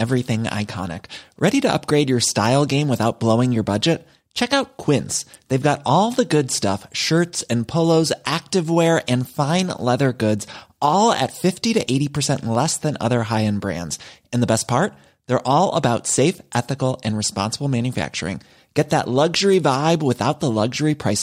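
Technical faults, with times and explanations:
0.13–21.09 s, word clock ticks: around thirty sharp ticks recur about every 0.7 s across the speech. The receiving device's clock runs roughly 30 ppm off the sender's, so each time the clocks slip, a single sample is dropped or repeated, producing a brief discontinuity.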